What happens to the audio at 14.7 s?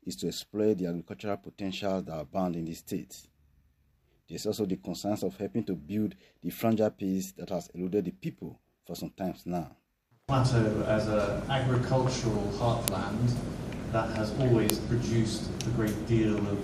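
At 14.70 s a file header is played as audio: a joined piece kept its header, so those bytes play as samples and give a sharp, loud click. A waveform shows a narrow spike; a spectrogram shows a thin vertical broadband line.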